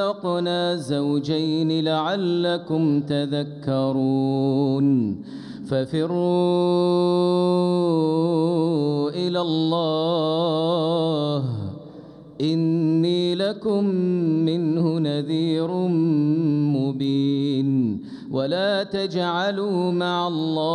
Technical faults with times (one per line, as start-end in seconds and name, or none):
none